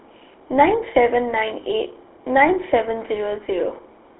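From start to finish the speech carries the GSM full-rate codec's signature: a buzzy, gravelly roughness, plainly audible, consistent with a 13 kbps rate. The codec rebuilds the voice from a vocal-tract filter driven by a regular pulse train that keeps only a third of the excitation, so fine detail is lost. Band-limiting to about 300 Hz–3.7 kHz thins the sound. A spectrogram shows a hard ceiling near 3.8 kHz, with blank space above.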